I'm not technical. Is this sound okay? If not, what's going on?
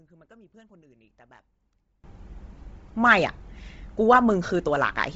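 No. There are two problems in this speech recording.

From the start to about 2.04 seconds, the voice nearly disappears. Then it comes back to normal loudness. This sounds like one channel inverted. A stereo recording has a left and a right side. If one side is flipped upside down, the two sides cancel each other when combined into one. The voice sits in the middle, so it cancels almost completely. Only a faint trace is left.

The whole clip also sounds grainy and a bit breathy. The top of the sound stops at about 7.8 kHz, so it lacks sparkle. This is likely Bluetooth LC3 compression, the format used by newer Bluetooth earbuds and speakers. Here it squeezed the sound very hard. It threw away much of the fine detail and filled the gaps with a hiss-like texture.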